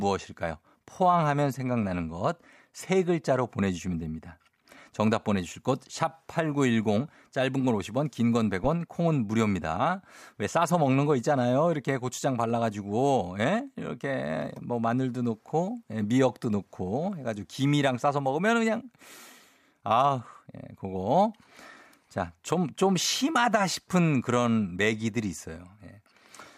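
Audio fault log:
8.64–8.70 s phantom power thump: supply switching on the live input sends a voltage step through the coupling capacitors, giving a deep thump that peaks at about −21 dBFS and decays within 13 ms.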